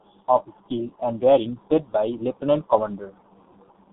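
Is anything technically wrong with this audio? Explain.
Yes. The speech carries G.723.1 codec damage throughout. Its coarse 30 ms frames and a bitrate near 6 kbit/s leave it muffled and hoarse, with blurred consonants and nothing above 3.8 kHz.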